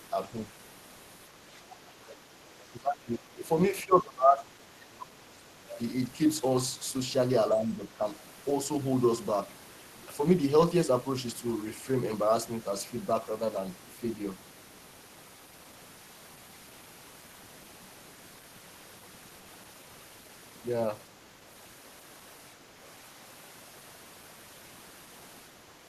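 At 2.59 to 2.64 s, a faint scrap of the other side's voice leaking through, roughly 30 dB under the talker, likely residual loudspeaker echo the canceller missed. Then from 2.7 to 3.49 s, 3.7 to 5.7 s and 7.51 to 8.04 s the speech gets pushed right down, by about 25 dB in the first two and about 10 dB in the last. That's likely speech suppressed in double talk, with the canceller ducking everything while both sides overlapped.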